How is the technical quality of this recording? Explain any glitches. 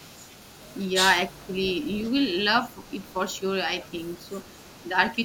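The quality is held back by two echo-related problems in this speech.

There's an echo leak at 0.0–0.92, 1.29–2.4, 2.58–3.41, 3.82–4.89 and 5.05–5.1 s. A faint copy of the speech trails about 309 ms behind, roughly 25 dB down at first and fading to about 35 dB. That's likely a loudspeaker echo the canceller didn't fully remove.

Speech suppressed in double talk shows up at 1.37–1.53 s. The voice briefly dips by about 15 dB for roughly 150 ms, likely because the canceller ducked everything while both sides overlapped.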